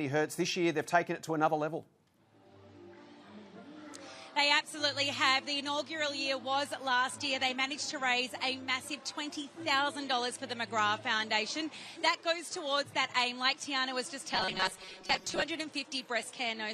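From 14.34 to 15.42 s the sound turns into a rigid metallic buzz near 188 Hz, robotic sound likely from about 5 ms buffers repeated to fill roughly half the time.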